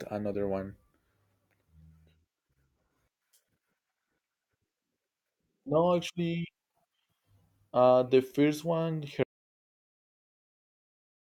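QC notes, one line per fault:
9.24–11.30 s, audio dropout to silence: after "uh the first one" the speech cuts to silence with no room tone until the end, likely from a lost input.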